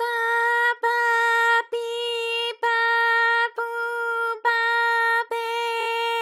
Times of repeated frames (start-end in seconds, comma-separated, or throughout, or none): 5.79-5.86